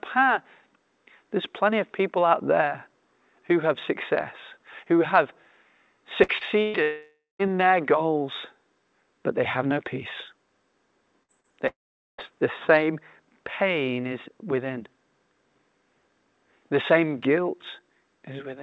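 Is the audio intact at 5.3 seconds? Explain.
Yes, the audio is intact at 5.3 seconds, with no dropout, glitch or other fault at that moment.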